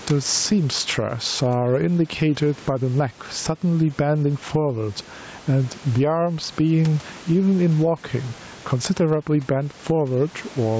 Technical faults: gain pumping

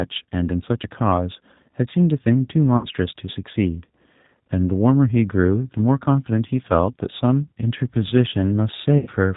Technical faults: G.729 codec; VoIP packet loss concealed by the speech codec

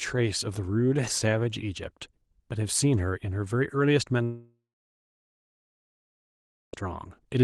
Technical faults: long network dropout

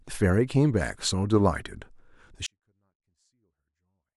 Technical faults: 24-bit alignment error (too quiet)

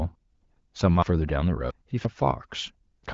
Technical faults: dropped buffer (overrun)

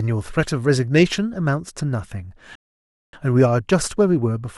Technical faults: rebuffering stall

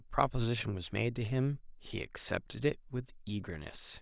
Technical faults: none

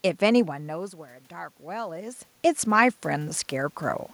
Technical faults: automatic gain rising

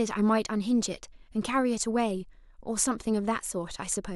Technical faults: none

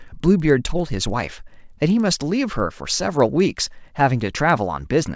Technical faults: resampler restarted on every block

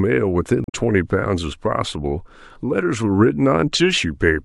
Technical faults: damaged data in a compressed stream

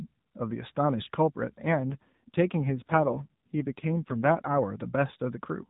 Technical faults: AMR rate drop

